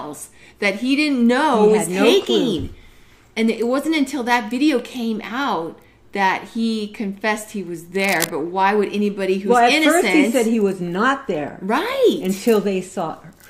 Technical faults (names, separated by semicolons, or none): cable scratch noise